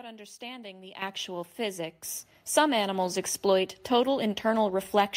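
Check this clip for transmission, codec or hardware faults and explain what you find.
There is one fault, the microphone volume stepped up, at 1.02 s by about 11 dB and again at 2.04 s by about 6 dB. Software raised the device input gain in abrupt steps, so speech and background jump together, unlike a gradual automatic-gain ramp.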